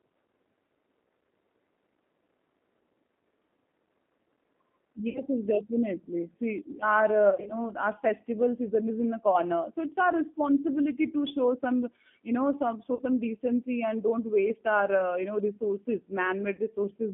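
From the start, the whole clip carries G.729 codec damage. The line is limited to 200 Hz to 3.4 kHz. At 8 kbit/s, the speech is rebuilt from a filter, a pitch predictor and a few pulses. It sounds plainly rough and synthetic.

VoIP packet loss concealed by the speech codec then hits five times: 5.09 to 5.26 s, 7.30 to 7.53 s, 9.31 to 9.37 s, 12.95 to 13.02 s and 16.56 to 16.62 s. The decoder extends its last pitch and filter into a buzzy tone or coloured noise that fades. The 7.30 s event is worst, about 120 ms lost, scattered over 200 ms. The others lose 20 to 60 ms. Each leaves the voice weak briefly afterwards.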